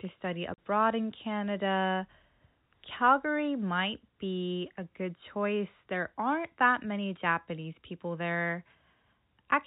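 At 0.54 s, just after "to study", packets of the speech stream failed to arrive, and the receiver had no concealment, so it played plain silence in their place until 0.58 s. This is packet loss filled with silence. The 40 ms gap, which fits two lost 20 ms packets, cuts the speech off abruptly with hard edges at each end of the hole, against the narrow telephone band of the G.711 coding.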